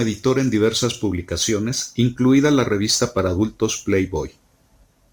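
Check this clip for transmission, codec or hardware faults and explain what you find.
There's one hardware fault here, running through the whole clip: sample clock jitter. The converter's clock wanders by a few microseconds, so each sample lands slightly off time. Steep, loud, bright parts of the speech pick up a grainy hiss, about 30 dB down, which disappears in the pauses.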